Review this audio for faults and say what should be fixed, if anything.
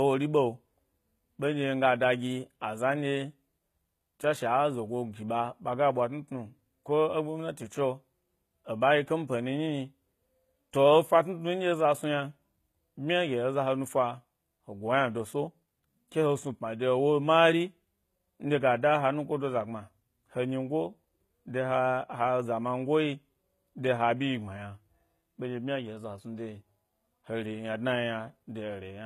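HE-AAC compression damage is present throughout the speech. The upper register sounds synthetic: s sounds come out gritty and lisping, with a metallic sheen, and nothing is present above about 14.9 kHz. The likely cause is spectral band replication, where only the lower spectrum is coded and the treble is rebuilt by copying lower bands upward under a coarse envelope, so harmonics don't line up across the crossover. The plainly audible damage fits a bitrate around 20 kbps. To prevent it, encode from the original source with plain AAC or Opus at a higher bitrate.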